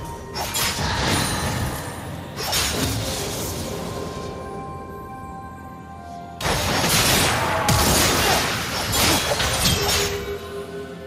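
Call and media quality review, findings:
No audible faults found in this clip.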